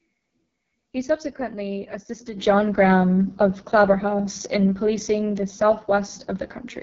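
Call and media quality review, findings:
AMR wideband (HD Voice) codec, entire clip, 0 to 6.8 s. Speech rough and raspy. Bandwidth reaches about 7 kHz, nothing above 7.4 kHz. Heavy damage fits the lowest AMR-WB mode, around 6.6 kbit/s. Probable component: mobile voice path in a low-rate codec mode. Mechanism: pulse-driven vocal tract model too coarse at this rate, and the 6.4 to 7 kHz band is filled with shaped noise. Unlike narrowband AMR, there is no dull 3.4 kHz cut-off.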